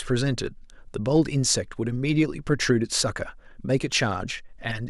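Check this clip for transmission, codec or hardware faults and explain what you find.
One hardware-type fault is present: a single loud pop at 3.92 to 3.94 s, lasting about 20 ms and standing a few decibels above the speech level. It is likely a sudden voltage step or pulse, from a connector, switch, static discharge or driver glitch, added to the signal and shaped into a brief thump. Unlike a dropout, the speech carries on underneath without a gap, and unlike clipping, the pop is an added burst, not flattened peaks.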